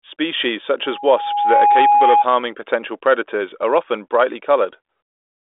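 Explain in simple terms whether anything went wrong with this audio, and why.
A loudspeaker feedback squeal runs from 0.84 to 2.26 s. The microphone is picking up the loudspeaker it feeds, so one pitch near 826 Hz keeps looping back louder. It swells over most of a second until it rises above the speech.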